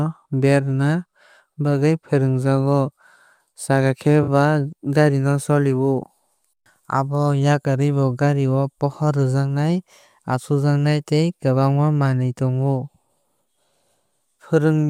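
At 4.23 s the speech hits a brief AAC frame loss with concealment, lasting about 43 ms to 4.27 s, which fits two lost frames. Instead of going silent, the decoder rebuilt the gap from the last good spectrum, so the sound smears into a short noisy, phasey patch. That filled-in texture is what separates it from a plain dropout, which would leave a hard hole or a click at the edges.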